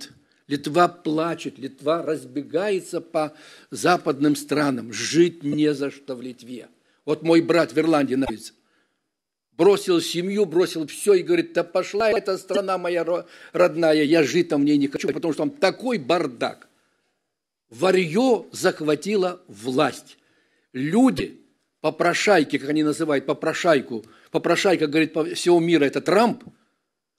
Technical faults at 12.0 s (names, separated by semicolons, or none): chunks out of order